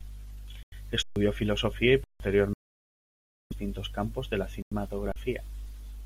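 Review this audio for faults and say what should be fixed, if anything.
Three Bluetooth dropouts break the speech: 0.63 to 0.73 s (about 93 ms), 2.53 to 3.53 s (nearly a full second, ending just before "campos de la"), and 4.62 to 4.73 s (right after "campos de la"). Each time the output falls to true silence, and the speech comes back further on, as though it had kept playing unheard. The likely cause is wireless audio packets arriving too late at the headphones and being discarded. The longest gap fits the loss of dozens of packets. Keeping the headphones close to the source, clear of 2.4 GHz interference, or using a wired path would prevent it.

Three underruns with held sample occur at 1.03 to 1.16 s (135 ms), 2.04 to 2.20 s (160 ms), and 5.12 to 5.16 s (40 ms). Here the output buffer ran dry and the converter froze on its last value. That is what sets them apart from the dropouts: the waveform sits flat at the held value, so the onset makes almost no click. 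Live audio kept arriving during the first two gaps and was lost, roughly 150 ms each time, and about 40 ms in the last. A larger output buffer, or a playback thread that is not starved of processing time, would prevent it.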